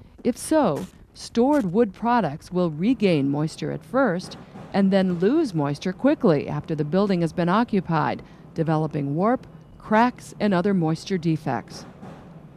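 No technical faults can be heard anywhere in this audio. There is nothing here that calls for a time or a cause.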